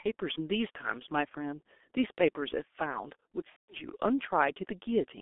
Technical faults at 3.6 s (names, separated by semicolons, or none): G.723.1 codec; VoIP packet loss concealed by the speech codec